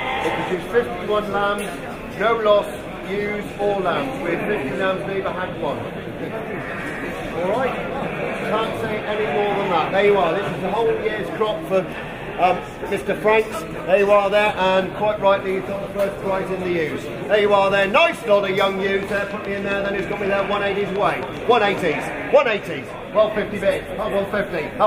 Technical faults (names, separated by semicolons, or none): train of clicks